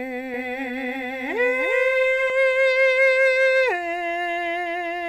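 From 0.34 s to 2.3 s the music carries a doubled audio track: a second full-band copy trails the original by roughly a third of a second and sits a few decibels lower. It has no reverb tail, so it sounds like a hard echo and not like room sound, and it cuts in and out abruptly. This is likely a second capture path running late. On a waveform and spectrogram, every onset reappears as a slightly weaker duplicate offset by that fixed gap.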